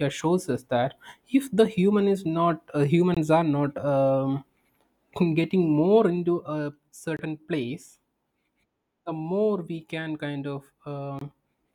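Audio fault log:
3.14–3.17 s, 7.17–7.19 s, 11.19–11.21 s: gap between chunks. The speech is cut by three silent holes of about 23 ms each, spaced about 4 s apart. The audio was delivered in 4-second chunks, and a short stretch of silence was inserted at each join. Unlike a dropout, no speech is lost. The sound resumes exactly where it stopped, and the strict regular spacing points to chunk boundaries rather than random network loss.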